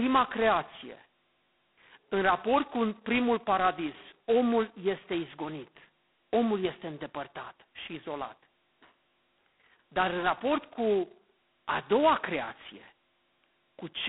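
Speech carries G.726 ADPCM damage throughout: a harsh, rasping hiss that rises and falls with the speech level, fitting the 16 kbit/s rate. That level-tracking grit distinguishes it from steady background noise, and the 200 Hz to 3.4 kHz telephone band leaves nothing above 3.9 kHz.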